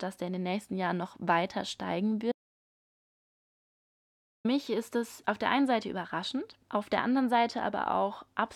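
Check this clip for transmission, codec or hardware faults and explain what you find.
One fault is present. From 2.32 s to 4.45 s the speech suffers an audio dropout to silence: about 2.13 s of input is missing, likely from a lost link or device while recording continued writing silence. The speech stops abruptly into dead silence with no room tone, then resumes mid-flow.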